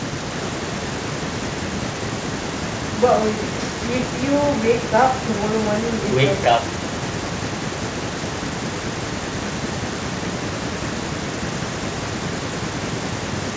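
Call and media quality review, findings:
No findings in this call and media quality review: the speech on the call path shows no faults.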